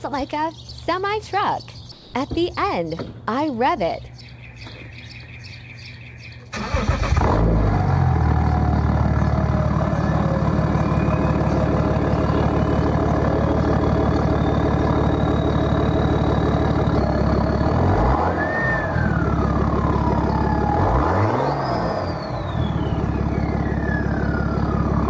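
From 1.92 to 2.14 s, the real background drops out for about 220 ms and a steady, featureless hiss about 4 dB quieter takes its place. This is likely comfort noise in place of the background, inserted after the sending side's voice detector paused transmission. On a spectrogram, the textured noise floor, some 23 dB below the loud passages, becomes a smooth, even band, still capped at 8 kHz like the rest of the call. The waveform shows a flat, slightly narrower noise envelope.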